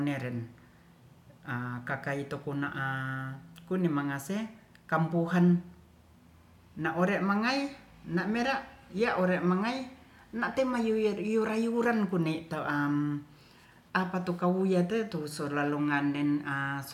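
Listening to this speech recording, nothing technical stood out.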